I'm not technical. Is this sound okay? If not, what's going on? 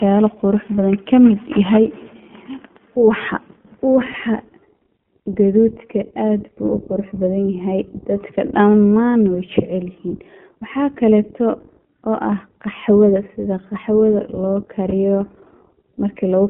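No. The whole clip went through the iLBC codec, a phone-line speech coder that keeps only about 150 Hz to 3.4 kHz, so the speech sounds narrow, slightly rough and synthetic. There are also lost iLBC frames at 4.12–4.16 s and 14.90–14.93 s, just after "sida qoxwada loo". Each gap fits a single missing 20 ms chunk, patched with a brief held, buzzy sound before the speech returns immediately.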